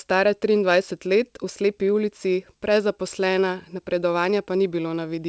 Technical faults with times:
none

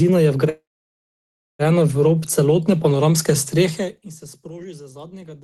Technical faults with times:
0.49-1.62 call audio freeze

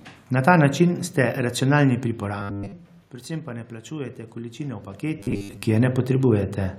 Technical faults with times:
2.20-5.95 automatic gain rising
2.38-2.73 robotic sound from repeated short buffers
5.20-5.63 robotic sound from repeated short buffers

